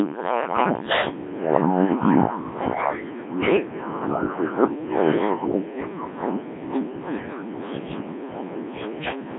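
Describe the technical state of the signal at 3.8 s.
At 3.8 s the speech carries Wi-Fi interference, as it does for the whole clip. A nearby Wi-Fi radio's bursts are picked up and rectified by the audio circuit. Its beacon repeats every 102.4 ms. That gives a steady faint tick about ten times a second. It sits well down, roughly 40 dB below the speech.

The same moment is also passed through the Codec 2 vocoder, again across the entire clip. This codec keeps only pitch, voicing, energy and a spectral outline. The decoder then rebuilds the voice from sine waves, so the original waveform is gone. The damage here is heavy. The voice sounds robotic and buzzy, which fits a very low rate near 1.3 kbit/s. The band runs only from 200 Hz to 3.5 kHz.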